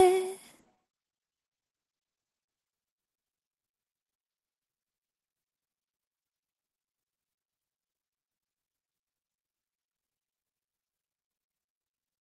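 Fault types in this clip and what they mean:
Call bitrate drop: from 0.44 to 3.49 s the encoder falls from 32 to 12 kbps, coding coarsely and narrowing bandwidth from 12 kHz to 8 kHz, so audio turns muffled and rough.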